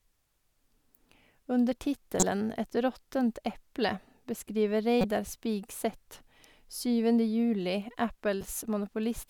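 Corrupt frames decoded in this speech at 2.19–2.23 s, 5.00–5.04 s (just after "råttent eple beskriver") and 8.41–8.47 s: damaged compressed frames were played anyway, misplacing energy as brief chirps or noise bursts, loudest first and faintest last.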